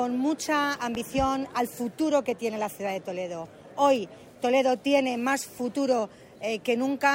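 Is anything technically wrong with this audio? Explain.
Yes. There is one loud pop, at 0.95 to 0.97 s. It is a single sharp burst, roughly 10 dB above the surrounding level. The sound underneath carries on unbroken. The likely cause is a sudden voltage step or pulse entering the signal path, such as a plug being seated, a switch operating, a static discharge or a driver glitch. The circuits that follow shape that pulse into the brief thump heard here.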